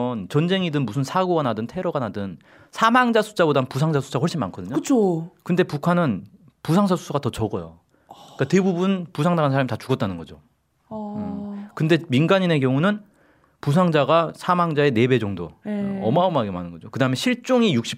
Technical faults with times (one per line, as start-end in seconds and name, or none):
none